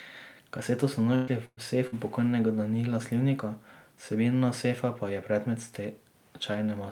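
Speech with three bursts of packet loss, at 1.15 to 1.30 s, 1.45 to 1.60 s and 1.87 to 1.95 s, where about 120, 120 and 60 ms never arrived in time. The receiver stretches the last sound into a fading buzz or hiss, then jumps ahead.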